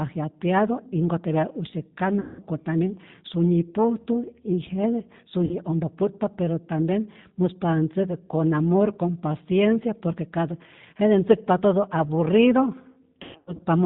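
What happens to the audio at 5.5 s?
From 5.45 to 5.56 s there is VoIP packet loss concealed by the speech codec. About 60 ms of audio is missing, which fits two lost packets. The decoder keeps extending its last pitch and filter at falling gain. The gap becomes a brief buzzy tone or coloured noise that fades, and the speech stays weak or distorted for a moment afterward. This happens inside the G.729 codec at 8 kbit/s, which cuts everything above 4 kHz and gives the speech a plainly rough, synthetic edge.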